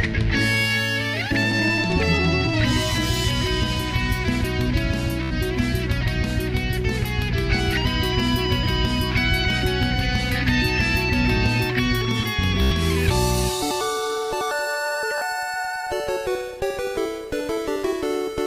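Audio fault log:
5.23–5.34 s, 12.62–12.73 s, 15.18–15.22 s: Bluetooth stutter. Late packets make the receiver loop its last slice into a brief buzz, dropping about 76, 91 and 30 ms before the sound jumps ahead.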